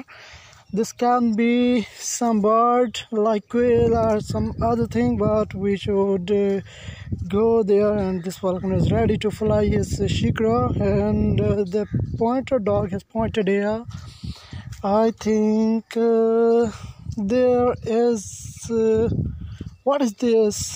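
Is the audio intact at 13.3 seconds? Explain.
Yes, at 13.3 seconds the audio plays through intact, with no dropout, click, distortion or other fault.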